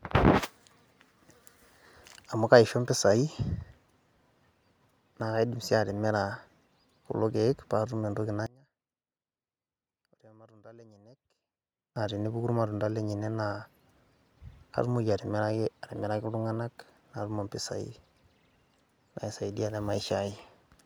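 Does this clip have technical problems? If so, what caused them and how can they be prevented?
Yes. From 8.46 to 11.96 s the speech suddenly drops by about 28 dB to a faint remnant, as if the voice had mostly cancelled itself, before returning to full level. The likely cause is one channel inverted: with one stereo side flipped in polarity, the centred voice common to both channels cancels when they are summed to mono, leaving only their small differences. Checking polarity on every channel, and auditioning the mix in mono before delivery, prevents this.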